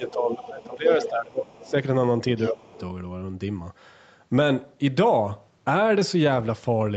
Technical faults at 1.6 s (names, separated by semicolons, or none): speech suppressed in double talk; other side's voice leaking through